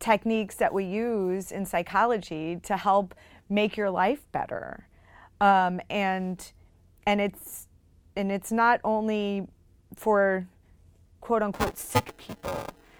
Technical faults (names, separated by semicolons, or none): buffer tearing